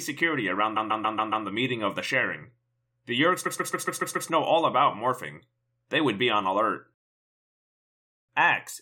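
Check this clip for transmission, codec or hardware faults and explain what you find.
Two faults, both repeated frames. A block of compressed frames was replayed by the decoder, so the same 139.3 ms slice of speech loops: from 0.76 to 1.45 s it plays five extra times, and from 3.45 to 4.29 s six extra times. That's heard as a rapid stutter, lengthening the clip by 0.70 s and 0.84 s. The block length fits a run of six frames.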